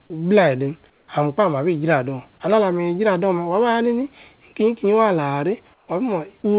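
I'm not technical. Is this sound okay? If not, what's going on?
No, not quite. From 0.90 to 1.08 s and again from 5.74 to 5.88 s, the real background noise is swapped for comfort noise in place of the background: a flat, slightly quieter filler. The likely cause is the call pausing transmission during silence and faking the gap. At 6.42 to 6.44 s a tiny bit of the speech itself goes missing, replaced by that same filler. That's sound dropped by the voice detector, which likely mistook part of the speech for background and stopped sending for a moment. The phone-call sound, with nothing above 4 kHz, comes from the call line itself.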